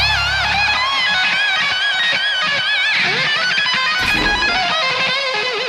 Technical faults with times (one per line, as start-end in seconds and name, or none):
1.37 overlapping chunks
3.88 overlapping chunks